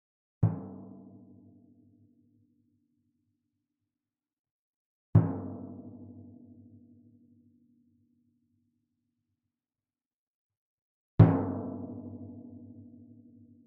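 Nothing in this audio stood out as a technical problem on listening.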